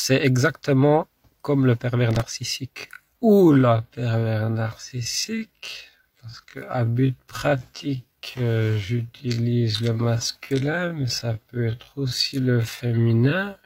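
From 2.11 to 2.28 s there's a burst of processor overload crackle: a handful of missed deadlines replay stale audio, which fits buffers of roughly 3 ms, giving a gritty tearing. From 2.73 s to the end the pace drops to about 0.54 times speed with unchanged pitch, so it drags, likely a time-stretched section.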